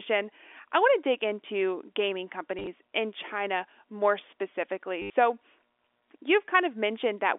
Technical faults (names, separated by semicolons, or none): packet loss with last packet repeated